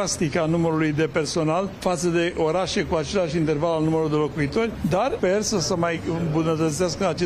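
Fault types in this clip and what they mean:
Nothing here calls for a fault entry, since the whole clip comes across as intact, with no glitches, dropouts or other technical problems to point to.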